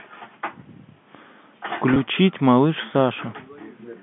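Speech over a G.711 telephone line (nothing above about 3.4 kHz) has packet loss with pitch repetition at 1.94–1.96 s. About 20 ms, likely a single packet, is bridged by a briefly held, buzzy tone rather than the silent gap or click of a plain dropout.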